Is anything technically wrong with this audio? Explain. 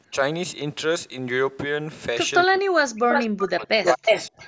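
Yes. The clip is speech, and two problems show up.

Speech suppressed in double talk, from 2.46 to 4.09 s and again briefly at 4.29 to 4.35 s: while both sides spoke, the echo canceller likely failed to separate the local talker from loudspeaker echo and muted both. The speech dips by roughly 40 dB at worst, and by about 25 dB in the short later dip, breaking into pieces for around one and a half seconds in total.

Echo leak, from 3.1 to 3.48 s and from 3.85 s to the end: the far end's loudspeaker echo was likely not fully cancelled, so the microphone's pickup was returned. A copy of the speech arrives 329 ms late, at about the same level as the original, heard as a doubled, trailing repeat.

The band stopping at 8 kHz comes from the call's microphone processing and is expected.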